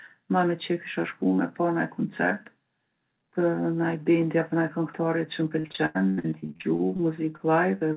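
From 5.6 to 7.01 s there is repeated packet loss, giving a robotic sound. Holes arrive one after another, the longest about 88 ms, and roughly 38% of that stretch is concealed audio rather than real signal. Each gap is bridged by extending the previous sound, so the speech turns choppy and robotic, with pieces dropped out. What separates it from isolated loss is the chaining: the next hole follows soon after the last one is patched.

After that come three separate cases of short concealed packet loss: 7.37 to 7.41 s (about 20 ms missing), 7.79 to 7.83 s (about 20 ms), and 7.93 to 7.96 s (about 40 ms, running to the end of the clip). Each brief hole is filled by continuing the last pitch or shaped noise and then blended back, heard as a quick smear or wobble. All of this sits within narrowband call audio with nothing above 4 kHz, which fits a G.711-type telephone codec.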